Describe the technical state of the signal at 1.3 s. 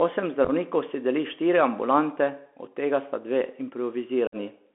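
At 1.3 s, as throughout, Bluetooth CVSD headset codec damage is plain. One-bit up-or-down steps, fitting a 64 kbps link, encode speech confined to 250 Hz–3.4 kHz, with scratchy sibilants and granular hiss.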